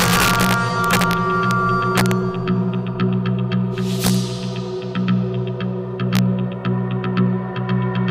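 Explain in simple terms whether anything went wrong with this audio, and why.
Integer overflow cracks the loudest moments, at 0.00 to 1.13 s, 1.51 s, 1.98 to 2.11 s, 4.05 to 4.15 s and 6.15 to 6.19 s. Too-loud peaks flip to the opposite extreme instead of flattening, sounding harsher than clipping.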